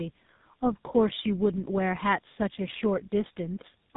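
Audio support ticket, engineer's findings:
Tandem speech coding throughout: rough, muffled, warbly speech, no content above 3.8 kHz. Sounds like AMR-NB output re-encoded as GSM full rate, so the second codec compounds the first's artefacts.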